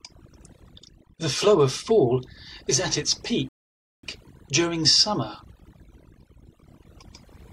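Speech runs through the whole clip with overdone noise removal. A noise reduction stage was pushed too hard. Any frequency band sitting close to its noise estimate gets cut deeply or shut off. The background drops, with small twinkling specks left behind. Quieter parts of the voice are removed along with the noise.

A rebuffering stall begins at 3.49 s and lasts until 4.03 s. The sound stops dead into silence for about 0.55 s. It then picks up exactly where it left off. The player ran short of downloaded audio and waited for more to arrive. No speech is skipped or lost. The pause simply adds that half second of dead air to the running time.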